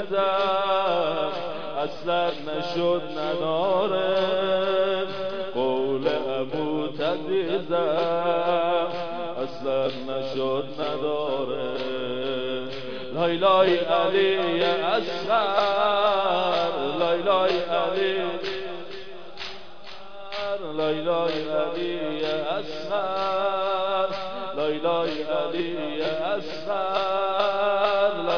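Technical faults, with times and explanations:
No technical faults are audible; the signal stays continuous and stable for its entire length, with no interruptions, level jumps or added noise.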